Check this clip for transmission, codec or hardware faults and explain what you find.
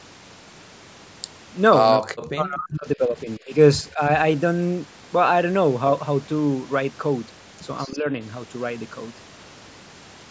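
Speech suppressed in double talk appears three times: 1.98 to 3.54 s, 3.83 to 4.01 s, and 7.85 to 8.11 s. The speech dips sharply, by roughly 40 dB at worst in the first stretch and around 15 dB in the later two. This is likely an echo canceller treating simultaneous far-end speech as echo and attenuating the near talker along with it. The call's microphone processing passes nothing above 8 kHz.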